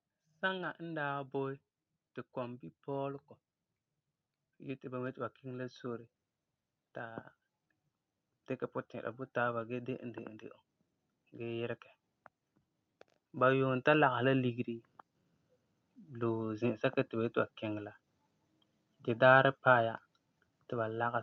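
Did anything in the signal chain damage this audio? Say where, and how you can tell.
Yes. Automatic gain rising at 0.09–3.27 s (about 5 dB), 4.44–7.29 s (about 4 dB) and 13.31–14.63 s (about 3 dB): call-processing gain control swelling speech and background together.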